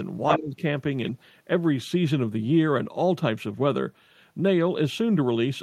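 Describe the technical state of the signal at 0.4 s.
At 0.4 s the signal sits inside a stretch of speech suppressed in double talk, running from 0.38 to 0.62 s. The cause is likely an echo canceller that heard loudspeaker sound and the local talker at once, failed to tell them apart, and pulled the whole pickup down. The talker's speech dips by as much as roughly 20 dB, with about a fifth of a second of it held down in all.

Just before, from 0.32 to 0.37 s, the other side's voice leaking through is heard. The far end's sound, played on the talker's loudspeaker, was likely not fully cancelled from the microphone, so a brief scrap of that second voice gets into the pickup at around the same level as the talker's own speech. It is a short intrusion, and the suppression follows directly after it.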